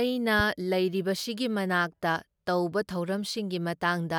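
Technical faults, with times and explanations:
0.39 to 0.42 s, loud pop: a single sharp pop lands on the speech and peaks a few decibels above it, while the speech continues underneath. It is likely a sudden voltage step, from a plug, switch, static discharge or driver glitch, that the following circuitry shaped into a brief pulse.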